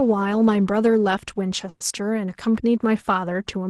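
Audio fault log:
1.69–1.83 s, call audio freeze: the sound stalls for about 0.14 s and the last moment is stretched into a fading buzz, likely because packets arrived late and the jitter buffer ran dry. Speech then resumes where it stopped, so nothing is lost, only delayed.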